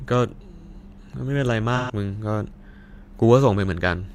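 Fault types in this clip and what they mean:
AAC frame loss with concealment: from 1.76 to 1.92 s, about 128 ms of speech becomes a smeared, noisy patch as the decoder rebuilds missing frames from the last good spectrum, which fits three lost frames. Unlike a dropout, the gap is filled rather than silent.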